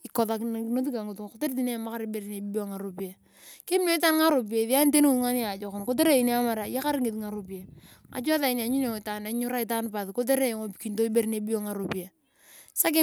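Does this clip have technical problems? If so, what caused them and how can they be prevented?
No, nothing in this speech recording calls for a cause or a preventive fix.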